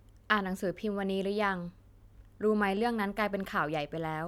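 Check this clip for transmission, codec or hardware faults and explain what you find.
No transmission, codec or hardware faults can be heard anywhere in this speech recording. There is nothing further to report.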